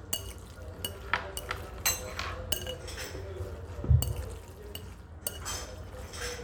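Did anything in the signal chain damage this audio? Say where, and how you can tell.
No, nothing in the chain audibly damaged this audio, and no stage leaves a fault that can be heard.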